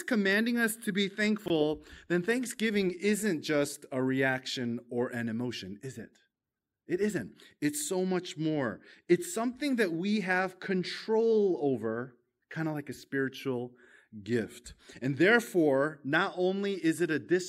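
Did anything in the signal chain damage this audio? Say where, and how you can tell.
Yes. At 1.46 to 1.50 s, between "commanding us to be" and "then thanksgiving isn't just", the speech briefly scrambles. These are chunks out of order, from the driver or buffer stage. A 20 ms chunk was written one chunk late, so it plays after the chunk that should follow it. Nothing is missing, but the sequence is swapped. That creates three hard joins, heard as a jumbled instant.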